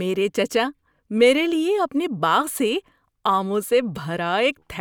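No technical fault stood out on listening to this speech recording.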